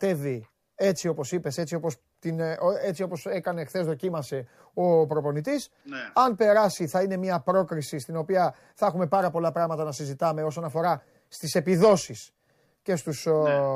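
Listening through the speech recording, nothing stood out as a technical problem at any point.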